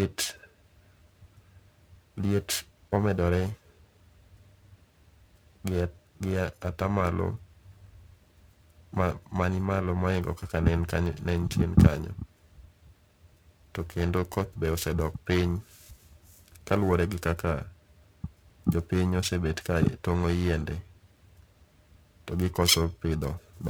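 Interference wobbles the converter's clock at around 1 kHz throughout, a periodic clock jitter that adds sidebands to the speech, giving a rough, metallic edge.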